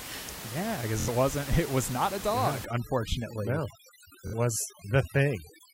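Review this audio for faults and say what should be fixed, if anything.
Bluetooth stutter at 1.00 to 1.09 s and again at 4.27 to 4.34 s. In each, the link failed to deliver audio packets in time, so the receiver kept replaying the last short slice it had, producing a brief buzzing repeat. The first gap is about 70 ms, which fits roughly three lost frames; the second is about 46 ms, pointing to two. The sound then picks up further along, as though it had kept running. Keeping the transmitter close, with a clear path and less 2.4 GHz congestion, would prevent it.

Overdone noise removal from 2.65 s to the end of the clip. The noise reducer is set too aggressively for the room noise, which sits about 12 dB below the speech. Any frequency band that dips near its noise estimate is pulled down hard, so the quieter parts of the speech are cut along with the background. What remains has near-silent gaps sprinkled with small twinkling artefacts. 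Lowering the reduction strength, or leaving that modest background noise untreated, would prevent it.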